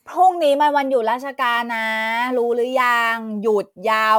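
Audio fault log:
1.21 to 4.19 s, sample clock jitter: an unsteady converter clock mistimes samples by microseconds, adding hiss about 30 dB down that swells on loud, bright speech.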